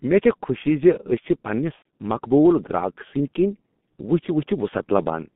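The speech runs through a G.723.1 codec the whole way, at a rate that fits 6.3 kbit/s, with the line band held to about 150 Hz to 3.5 kHz. The heavy coding in 30 ms frames leaves the voice muffled and hoarse, with smeared consonants.

Right after "چھ پننس", from 1.76 to 1.82 s, VoIP packet loss concealed by the speech codec takes over. The gap fits about three lost 30 ms frames. The decoder stretches its last pitch and filter into a fading buzzy tone or coloured noise, and the voice stays weakened as it recovers.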